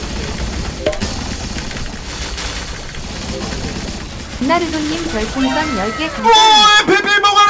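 Nothing goes wrong here: the sound simply arrives through an ordinary call path, with the top end stopping around 7 kHz the way you'd expect from a wideband call codec such as G.722.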